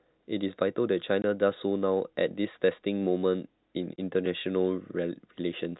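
At 1.22 s and 3.96 s, packet loss filled with silence cuts brief holes in the speech, each fitting one lost 20 ms packet, with hard edges. The waveform shows flat gaps and the spectrogram shows blank vertical strips, all within a G.711 telephone band ending at 4 kHz.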